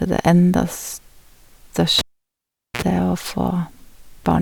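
At 1.99 s the cable is pulled and plugged in while live: a pop, then about 0.78 s of near silence, then a 53 ms burst of 60 Hz mains buzz as only the tip connects, and a second pop at 2.82 s when the speech returns.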